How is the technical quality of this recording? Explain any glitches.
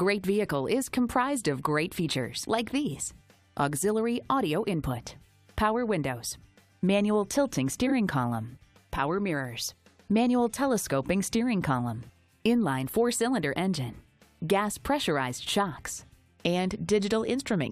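There is one glitch, at 7.87 to 7.92 s: a brief garbled flutter. This is frames out of order. Two neighbouring blocks of about 23 ms each were decoded in reversed sequence, so the halves play exchanged. No time is lost.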